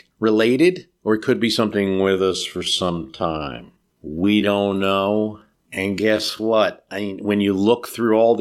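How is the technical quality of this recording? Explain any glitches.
The recording has one clear glitch, a time-stretched section. From 1.68 s to 6.60 s the speech plays at about 0.61 times its normal pace, likely because software lengthened it by repeating short slices to fill a longer slot. That makes it drag. Unlike a simple slowdown, the pitch doesn't drop.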